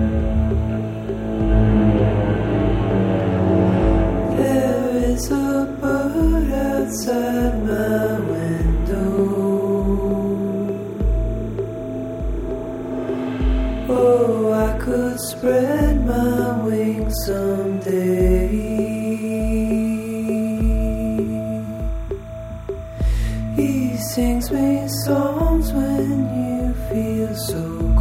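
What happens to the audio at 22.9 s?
Linear timecode from a neighbouring track or cable is leaking into the audio path at 22.9 s, as it does through the whole clip. That timecode bleed is a square wave flipping between tones near 1 kHz and 2 kHz at a pace that fits 30-frame code, sitting roughly 30 dB below the programme. It comes through as a steady, faint chirping warble running behind the sound rather than a single event at that moment.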